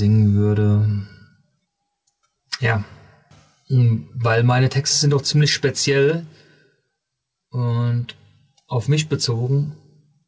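Throughout, gain pumping makes the level duck by about 10 dB under each loud sound, likely from excessive gain hitting a fast limiter. Unlike gating, the floor rises rather than cutting off.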